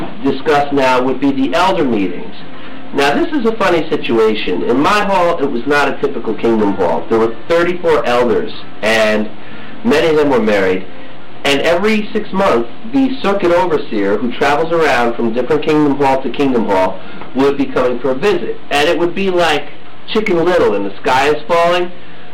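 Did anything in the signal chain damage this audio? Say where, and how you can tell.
Yes. Hard clipping runs throughout, likely at the converter input. Driven about 12 dB too hot, roughly a sixth of samples flatten, adding harsh fuzz on every loud passage.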